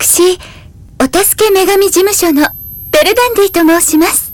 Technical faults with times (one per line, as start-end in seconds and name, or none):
0.00-4.33 hard clipping
1.45-4.33 switching supply whistle